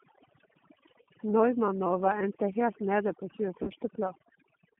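Throughout the speech, overdone noise removal has cut individual frequency bands whenever they sat near the tool's noise estimate. The background drops and breaks up into twinkling specks, and quiet parts of the voice vanish with it. Unlike a plain low level, the gaps flicker band by band.

Also throughout, the G.729 codec limits the audio to a telephone band of roughly 150 Hz to 3.4 kHz, consistent with an 8 kbit/s G.729A stream. It rebuilds the voice from a vocal tract filter and a few pulses per frame, giving a rough, synthetic buzz. This codec damage is plainly audible, distinct from the twinkling specks of the noise removal.

At 1.02 to 1.07 s, and again at 3.63 to 3.70 s just after "endte helt nede på", VoIP packet loss concealed by the speech codec appears. About 40 ms is missing each time, which fits two lost packets. The decoder stretched its last pitch and filter into a fading sound, and the voice stays weak briefly afterwards instead of cutting to clean silence.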